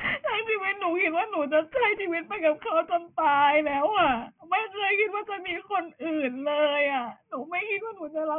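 Throughout the speech, the sample rate was cut without an anti-aliasing filter first, which fits a drop to about 6 kHz. This aliasing folds everything above 3 kHz back down as false, unrelated tones, fairly strong against the voice, making sibilants gritty and metallic.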